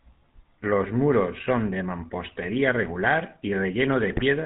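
Throughout, the GSM full-rate codec gives the speech a buzzy, gravelly roughness; the spectrogram shows nothing above 4 kHz and coarse, smeared harmonics. From 4.08 to 4.23 s, GSM bit errors corrupt the decoder's filter, pitch and gain values, producing squawks and gargling, with bent spectra and sudden level spikes in the waveform.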